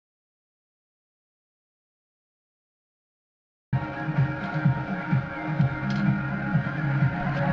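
The input was likely lost before the recording began, perhaps through a disconnected device or a stray mute, while the recorder kept writing silence. This audio dropout to silence runs from the very start until 3.73 s: dead silence, no room tone, before sound abruptly appears.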